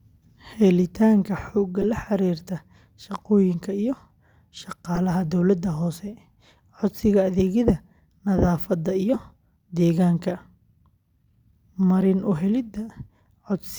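At 1.81–1.85 s, 4.95–4.98 s and 9.14–9.16 s, a corrupt frame decoded from damaged bitstream data puts misplaced spectral energy across a frame or two, heard as brief chirps, squeaks, blips or bursts of noise.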